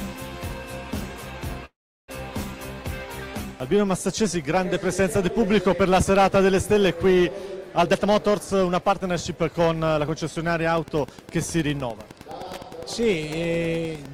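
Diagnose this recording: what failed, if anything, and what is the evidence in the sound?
A filter restarted on every block, in the driver or buffer stage, runs through the whole clip. A 200 Hz buzz rides on the sound and follows its level. Each block starts from a zeroed filter state and opens with a small transient, which points to blocks of about 5 ms.

A call audio freeze appears from 1.65 to 2.10 s. The sound stalls and fades, then about 340 ms of silence follows before it resumes where it stopped. Nothing is lost, but 428 ms of delay is added. The likely cause is packets held up on the network, which drained the jitter buffer.

A jitter buffer speed-up in call processing runs from 7.77 to 10.35 s. The sound plays at 116% speed with unchanged pitch and feels hurried. The receiver cut short pitch-period pieces, roughly 0.4 s in total, to shed excess buffered delay.

Wi-Fi interference in the analogue wiring starts at 10.74 s and lasts to the end. 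A steady tick repeats every 102.4 ms, about ten per second, at roughly 20 dB below the sound. A nearby radio's beacons are being rectified by the audio circuit.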